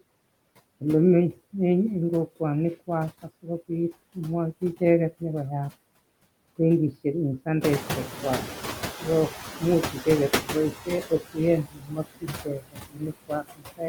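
Noise suppressor artifacts run through the whole clip. The suppressor pulls down bands it judges to be steady noise by about 19 dB frame by frame, so the background dips between phrases and swells beneath them. On a spectrogram the noise floor looks patchy and mottled.

From 7.61 s to 10.67 s the noise suppressor is catching up. The room noise jumps by about 14 dB near 7.5 s, and the suppressor's estimate lags for about 3.06 s. During that stretch only about 9 dB is removed, so the louder noise comes through before it sinks. A spectrogram shows a brighter band of noise that fades as the estimate adapts.

Speech is cut by the noise suppressor from 10.73 s to 11.37 s. Within that span, roughly 150 ms of sound is treated as noise and pulled down by up to about 17 dB, leaving consonants or endings faint and swallowed. The waveform shows brief, sharp dips in the envelope. From 11.64 s to the end the same thing happens more deeply, up to about 22 dB. 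Softer stretches sink with the background, and the spectrogram shows gaps in the upper harmonics and fricative energy.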